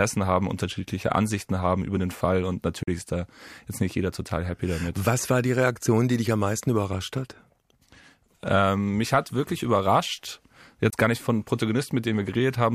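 Speech clip with two short gaps of silence, at 2.83 to 2.88 s just before "ist da jetzt nicht", and at 10.90 to 10.93 s between "mich hat wirklich überrascht" and "gar nicht von". These are likely Bluetooth dropouts: about 40 ms and 20 ms of audio are lost, fitting two packets and then one. Unlike a pause or an edit, the sound resumes as if it had kept playing, so what fell in the gap is simply missing.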